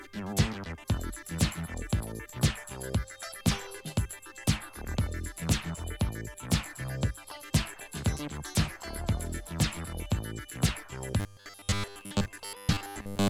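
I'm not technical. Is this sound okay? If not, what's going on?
No. From 11.2 s to 13.3 s the sound turns into a rigid, metallic buzz at 100 Hz: robotic sound from repeated short buffers, likely from repeating 10 ms snippets over most of it.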